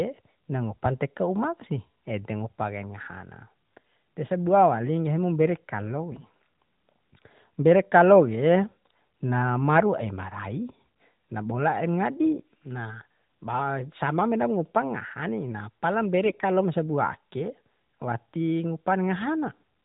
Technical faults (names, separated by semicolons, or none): AMR bit errors